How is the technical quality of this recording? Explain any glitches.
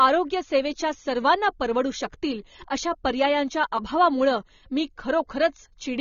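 The recording is plainly damaged by codec compression throughout. The likely cause is low-bitrate AAC compression, which fits about 24 kbps. It cuts everything above 6.9 kHz and starves the speech of detail, so it sounds dull and smeared.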